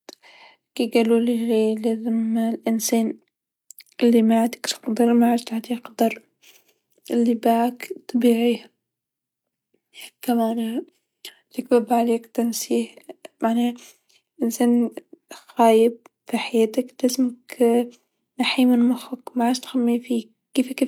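Nothing stood out on listening to this speech recording; no technical problem could be heard anywhere in it.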